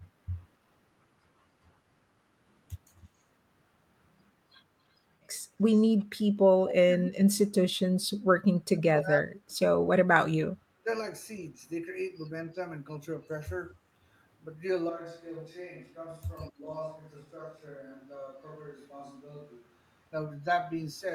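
At 5.72 to 5.82 s and again at 5.99 to 6.04 s, faint scraps of speech return about 280 ms late. This is an echo leak, likely a far-end speakerphone whose echo canceller let some residue through. It is a delayed duplicate added on top, not a loss of the talker.

Between 6.57 and 7.79 s, 8.52 and 9.95 s, and briefly at 10.74 to 10.87 s, the voice itself dips deeply and breaks into pieces. This is speech suppressed in double talk, likely the canceller clamping down while both sides spoke. Nothing is added. The near talker is turned down instead.

From 14.90 to 20.12 s the sound abruptly turns roomy and hollow, with thinner bass, a level about 5 dB lower and more background noise, about 35 dB below the speech. This is a switch to a distant microphone, likely after the close microphone dropped out. Unlike the suppression dips, the change holds steady for five seconds. One shallower double-talk dip still occurs inside it, at 16.51 to 16.68 s.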